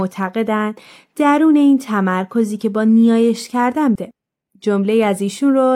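At 3.95 s the speech jumps abruptly forward with a small blip. The flow breaks and resumes at a later point. This is likely a stream segment skipped: one segment of the stream failed to load, and playback went straight on to the next.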